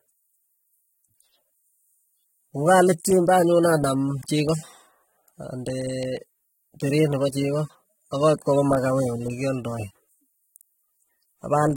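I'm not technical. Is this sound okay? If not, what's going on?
No. AAC compression damage runs through the whole speech clip. To save space, the encoder likely threw away detail it judged you wouldn't miss, cutting everything above 16.6 kHz. The voice comes across duller and smeared, with a fizzy, warbling edge on hissy sounds.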